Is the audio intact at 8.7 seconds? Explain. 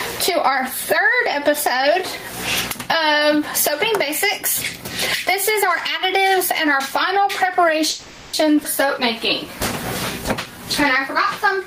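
No. Right around there, at 8.63 to 8.66 s, there's a skip ahead: playback jumps forward and a chunk of roughly 150 ms of audio is simply gone. Only about 10 ms of fill bridges the gap, so the material on either side is butted almost straight together. That points to audio being dropped in transit or thrown out when a jitter buffer overflowed, with later audio already queued and ready to play.

Gain pumping is also running through that moment, as it does across the whole clip. The level swings by something like 20 dB. Loud and soft parts end up squashed close together. That's most likely the input gain set far too hot, with a fast limiter or compressor clamping down on every peak.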